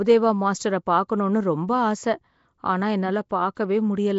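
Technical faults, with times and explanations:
Throughout, Nellymoser compression: the speech carries a rough, hissy fringe and a smeared, underwater feel, and there's nothing above 7.7 kHz. That's likely the old Flash microphone codec, Nellymoser Asao. It spends a fixed, small bit budget on short blocks, so quieter bands get no real coding and are backfilled with noise, which causes that grainy halo. The damage is plainly audible, and it fits a rate of around 32 kbps.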